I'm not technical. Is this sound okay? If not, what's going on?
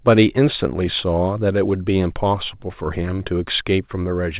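Yes, no faults found; the speech came over a standard phone-style call link using the G.711 mu-law codec, which carries nothing above 4 kHz, and that narrower sound is normal for such a call.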